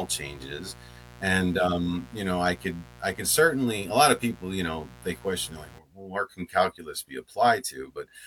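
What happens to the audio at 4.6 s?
At 4.6 s the speech is sitting on a mains buzz, which runs from the start of the clip to 5.79 s. Sharp switching spikes from a dimmer, rectifier or poorly shielded line arrive twice per 60 Hz cycle, stacking harmonics up into the kilohertz range, roughly 20 dB below the speech. Unlike plain hum, a smooth low tone at 60 Hz, this is a raspy, edgy buzz.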